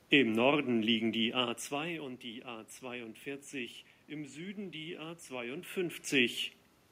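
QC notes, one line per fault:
No faults to note, so there are no per-fault lines for this clip.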